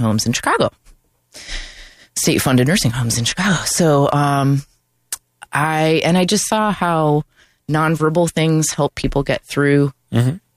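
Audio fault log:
No faults detected in this speech recording.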